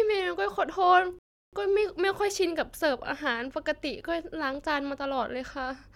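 A rebuffering stall hits from 1.19 to 1.53 s: the player runs out of downloaded audio, so the speech drops to silence for about 0.34 s, then picks up exactly where it stopped. No speech is lost, but the pause stretches the clip's timing.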